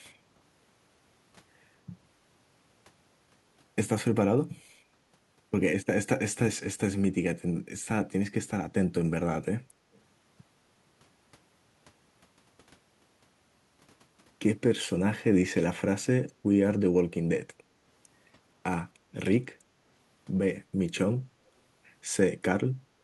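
An echo canceller likely missed some loudspeaker pickup, so at 9.93 to 10.01 s a very faint echo leak repeats the speech 257 ms late.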